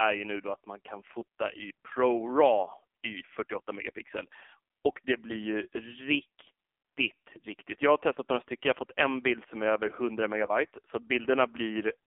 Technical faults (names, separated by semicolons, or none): AMR narrowband mobile codec; lost AMR speech frames